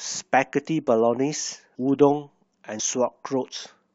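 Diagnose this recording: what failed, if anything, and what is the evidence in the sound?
Compressed frames skipped at 1.74 s and 2.79 s, a codec or storage-stage failure. At each point the speech jumps forward: roughly a third of a second of audio vanishes at the first, about a tenth of a second at the second. The jumps point to whole 26.1 ms frames, around ten and around four, lost from the file or rejected by the decoder. Overlapping neighbouring frames blend across each gap, so each join is a short smeared blip, not a sharp click.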